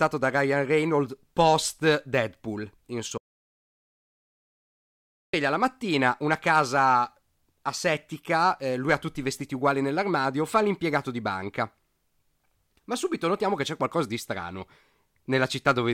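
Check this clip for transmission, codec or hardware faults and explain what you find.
One fault is present, an audio dropout to silence from 3.18 s to 5.34 s. For about 2.16 s the speech stops mid-flow and the signal falls to silence, with no room tone or noise floor underneath, before resuming abruptly on "la mattina una casa". The likely cause is a brief loss of the input, such as a disconnected device, a failed link or a momentary mute, while the recorder kept writing silence. Whatever was said during the gap is unrecoverable.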